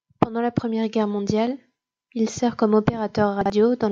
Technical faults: chunks out of order

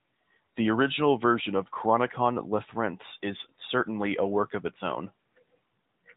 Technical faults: none

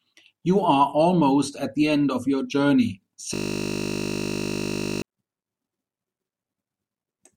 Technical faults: system hang loop

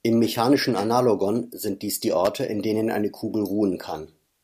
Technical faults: electrical switching spike

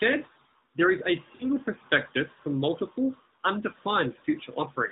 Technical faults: lost AMR speech frames

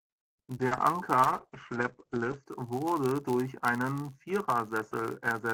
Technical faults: block size mismatch (padded); repeated packet loss (robotic sound); call bitrate drop

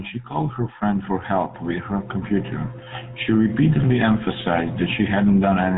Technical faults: GSM full-rate codec

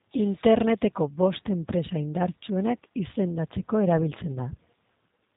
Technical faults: G.729 codec

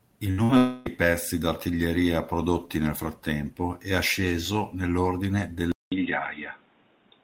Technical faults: burst of packet loss; long network dropout; input switched to a poorer device

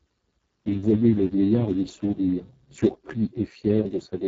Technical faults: Speex codec

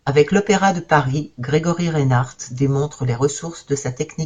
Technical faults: none

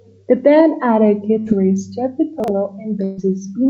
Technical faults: burst of packet loss; chunks out of order

